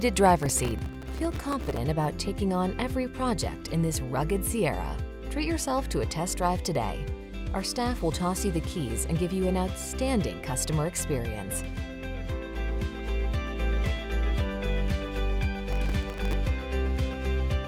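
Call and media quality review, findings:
Processor overload crackle, 0.41–1.77 s and 15.72–16.33 s. Audio thread missing deadlines on very short buffers, a millisecond or two each, dozens in a row, with stale audio replayed into each gap. Heard as gritty tearing crackle over the sound, stopping once load eases.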